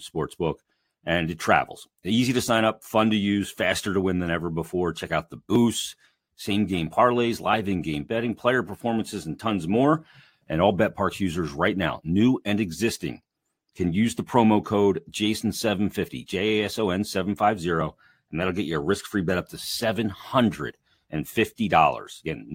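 No technical faults occur anywhere in the speech, so there is nothing to describe in time order.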